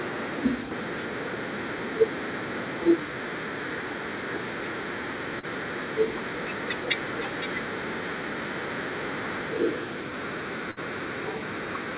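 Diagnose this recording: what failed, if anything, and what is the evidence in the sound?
Short concealed packet loss at 5.39 to 5.46 s, a network-stage fault. Roughly 30 ms of the speech never arrived in time, and the receiver's concealment papered over it with about 37 ms of extrapolated sound, continuing the preceding pitch or noise shape before crossfading into the real signal. The result is a brief smear or wobble, and any short consonant there can simply disappear. The narrowband sound, with nothing above 4 kHz, points to a telephone codec such as G.711 mu-law.

Burst of packet loss at 10.71 to 10.79 s, also on the network side. Here about 60 ms went missing in one run. It stretched the last sound for about 57 ms while fading it down, producing a held buzz or dying hiss, then jumped ahead to the audio after the gap. The speech in between is gone, so the resumed sound starts later in the utterance.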